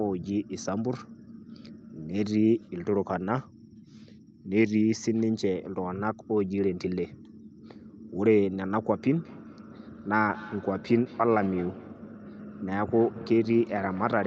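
From 9.18 s onward there is feedback echo between two devices: one replays the other's microphone feed, which gets recaptured, so speech returns roughly every fifth of a second, about 19 dB down.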